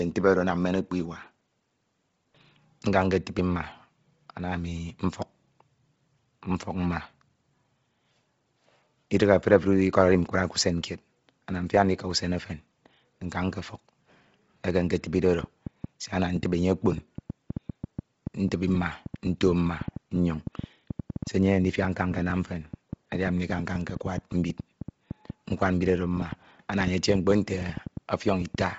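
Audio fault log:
throughout: Bluetooth LC3 compression. The speech has heavy codec damage: nothing is left above about 7.7 kHz, and the upper band that remains sounds breathy and grainy, with noise in place of real detail. The likely cause is a transform codec working in 7.5 ms frames at a low rate. It discards most of the upper spectrum and fills the gaps with shaped noise, a result that fits LC3 running near 24 kbps.
15.44–28.62 s: train of clicks. Starting just after "eke eketibide oro" and running to near the end, similar-shaped pulses tick over the speech and through the pauses. They come at about six per second with irregular spacing, around seventy in all, and their peaks sit roughly 10 dB above the signal, so they stand out clearly. The likely cause is intermittent interference or an unstable interface injecting repeated impulses into the path.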